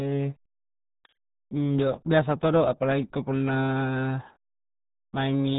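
Speech clip, heavily damaged throughout by the RealAudio 14.4 codec: nothing passes above 3.8 kHz, leaving muffled, gargly speech that fits an 8 kbit/s dial-up stream.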